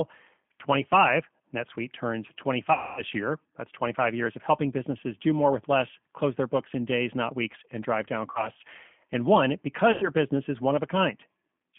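G.729 codec damage runs through the whole speech clip. The sound fits an 8 kbit/s G.729A stream: a narrow 150 to 3400 Hz line band with nothing above it, and a plainly rough, synthetic texture, because the decoder rebuilds each 10 ms frame from a vocal tract filter, a pitch predictor and a few pulses. VoIP packet loss concealed by the speech codec occurs at 2.73 to 3.03 s, at 8.31 to 8.49 s just after "weeks and drive down", and at 9.92 to 10.10 s just before "business is one". About 240 ms, 40 ms and 100 ms of audio are lost, and the decoder stretches its last pitch and filter into a buzzy tone or coloured noise that fades. It then takes some time to recover.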